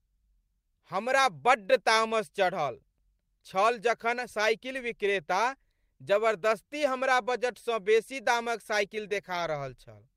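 Speech recording in which no technical fault can be heard at any point in the signal.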